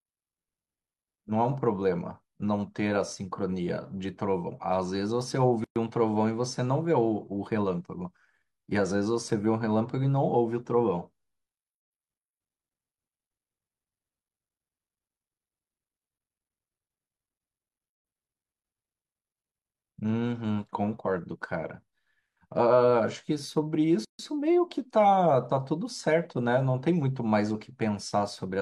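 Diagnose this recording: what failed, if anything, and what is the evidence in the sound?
The speech stops dead for short silences at 5.64–5.76 s (117 ms), 17.90–18.05 s (144 ms) and 24.05–24.19 s (144 ms), then resumes where it left off. These are codec-stage gaps at joins of encoded pieces: roughly 6-second pieces were joined untrimmed, leaving each piece's encoder delay and final-frame padding as silence.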